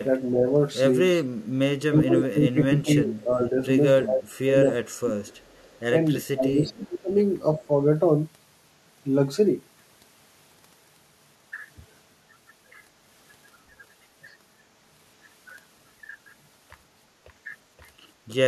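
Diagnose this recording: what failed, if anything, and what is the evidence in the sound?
Speech suppressed in double talk (call processing): the echo canceller likely treated overlapping talk as echo, dropping speech about 20–25 dB at 1.86–3.55, 4.04–4.29, 4.51–5.26 and 6.24–7.1 s.

Echo leak (call processing): loudspeaker pickup likely escaped cancellation, returning a copy 343 ms late at 4.37–4.51 s (about 15 dB down) and 5.29–5.8 s (about 35 dB down).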